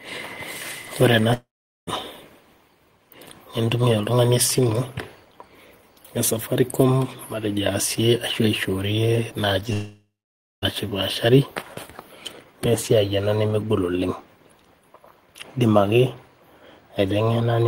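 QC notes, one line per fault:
1.33–1.90 s and 9.73–10.65 s, long network dropout: the speech trails off into a fading buzz, then sits silent for about 0.42 s and 0.55 s before resuming with roughly 0.54 s and 0.9 s missing, likely the receiver papering over audio that never arrived.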